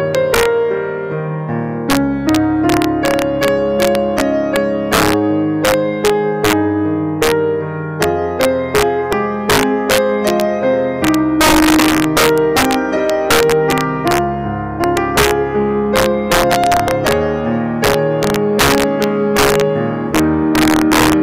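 A gain stage pushes the signal about 6 dB beyond the integer range, and instead of being limited, the overshooting values wrap around to the opposite sign: integer overflow. Throughout the clip, around one percent of samples flip across full scale, producing violent, sharp cracks on loud peaks.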